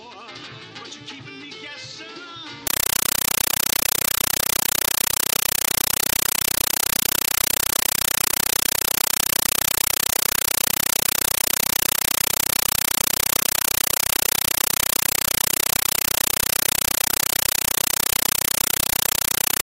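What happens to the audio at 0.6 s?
Nothing goes wrong at 0.6 s; the audio plays through that moment intact, with no dropout, click or distortion.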